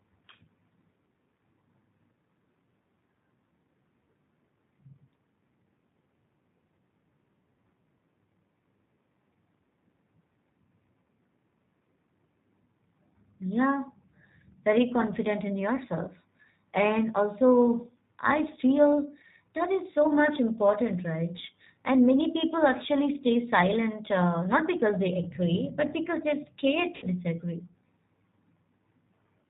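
From the start, the whole clip carries G.729 codec damage, and it is plainly audible. The speech sounds like the 8 kbit/s G.729A variant. The codec keeps only a vocal tract filter, a pitch predictor and a few pulses per frame. Everything above 4 kHz is gone. The voice stays clear enough to follow. It sounds rough, thin and slightly synthetic.

At 26.96 s, just after "but because they're scared", the clip has VoIP packet loss concealed by the speech codec. About 60 ms of audio went missing, which fits two lost packets. The decoder filled the gap by repeating its last pitch and filter at falling gain. The voice is stretched into a short sound that fades. Because each frame builds on the last, it stays weak and distorted until about 27.07 s.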